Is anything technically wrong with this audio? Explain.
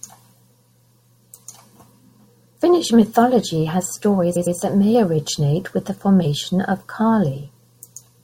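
Yes. At 4.35 to 4.56 s the speech stutters as a 106.7 ms stretch plays twice more. These are repeated frames: a run of compressed frames, which fits about five, was decoded again, adding 213.3 ms.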